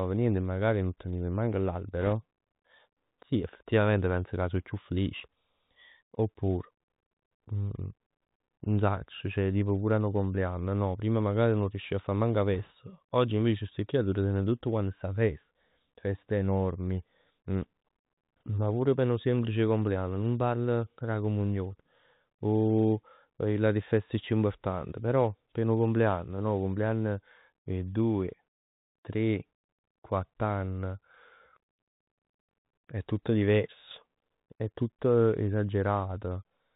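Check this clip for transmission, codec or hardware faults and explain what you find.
Two faults are present in the speech. The Bluetooth CVSD headset codec runs throughout: the one-bit delta coding, consistent with a 64 kbps link, cuts everything above 4 kHz, smearing sibilants and adding granular hiss. Bit errors on a Bluetooth voice link occur from 2.01 to 2.13 s, after "magari nun teniv manco", and from 12.55 to 12.71 s, after "a fa manco 'a". Flipped bits, around 1.5 and 1 percent, nudge the step-tracking briefly, producing rushing crackle rather than sharp clicks.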